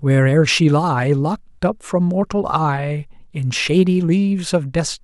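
No technical faults are audible.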